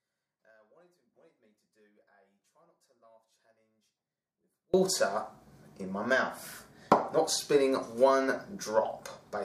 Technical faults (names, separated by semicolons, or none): one channel inverted